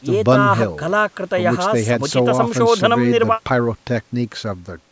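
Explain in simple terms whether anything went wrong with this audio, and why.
Nothing went wrong: the speech has simply passed through a call's microphone processing, which trims the deepest bass and carries nothing above 8 kHz, and that is normal for a call.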